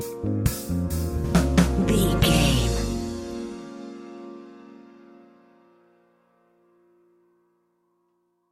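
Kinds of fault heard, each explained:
Nothing stood out on listening; no fault could be heard anywhere in the clip.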